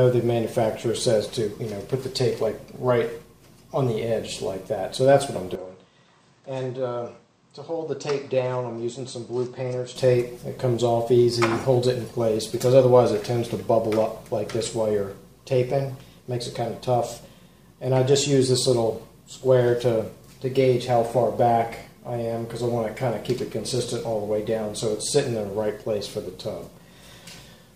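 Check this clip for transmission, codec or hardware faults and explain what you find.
One fault stands out, a change of input device partway through.

Input switched to a poorer device, from 5.55 s to 9.96 s. The capture likely moved to a different, lower-grade microphone and then back. Over that stretch nothing is present above 8.4 kHz, so the sound turns dull and boxy. The level falls by about 10 dB, and a new background noise floor sits roughly 35 dB under the signal. Both changes happen abruptly, with no silence at either switch.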